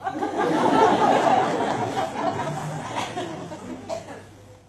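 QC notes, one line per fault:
1.16 s to the end: adaptive stream at a lower bitrate. The stream abruptly switches, without a gap, to a much thinner rendition, which fits a drop from about 96 kbit/s AAC to roughly 16 kbit/s HE-AAC. Content above 12.3 kHz disappears and the top end turns synthetic.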